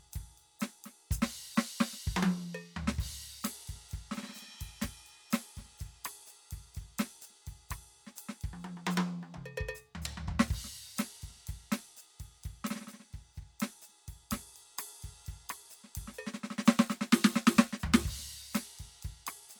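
Nothing stood out as a technical fault on listening to this music.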